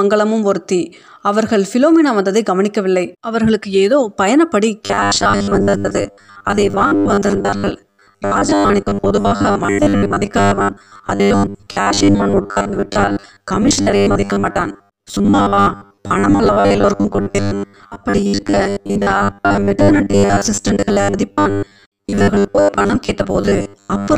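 From 4.84 s to the end at 24.18 s, the speech turns into a rigid metallic buzz pinned at 100 Hz: robotic sound from repeated short buffers. A 10 ms fragment likely keeps looping for most of the time while real audio is skipped. Unlike plain dropouts, the gaps are filled with repeated audio rather than silence.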